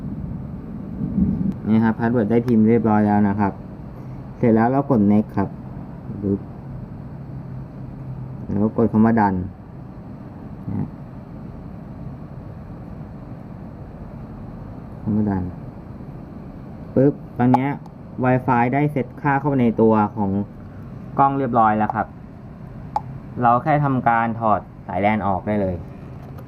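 Nothing stood out as a fault on listening.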